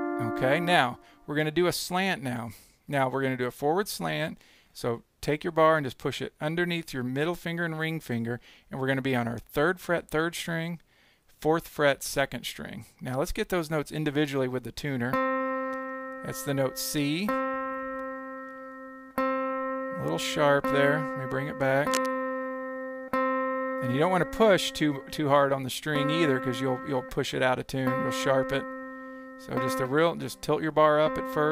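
A worn cable, connector or control was likely being moved between 21.91 and 22.13 s, so its contact resistance jumped about erratically for roughly a fifth of a second. That unstable contact puts dense, irregular bursts of noise onto the signal, sitting only around 10 dB below the wanted audio. The result is cable scratch noise: a brief, gritty scratching and rustling laid over the sound.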